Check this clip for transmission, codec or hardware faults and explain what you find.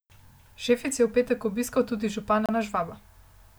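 One fault stands out, a CD skip. From 2.46 to 2.49 s the speech cuts out for about 30 ms with a tick, then resumes from a different turn of the disc's spiral, jumping abruptly. A waveform shows a brief flat gap; a spectrogram shows a thin vertical click and mismatched content either side.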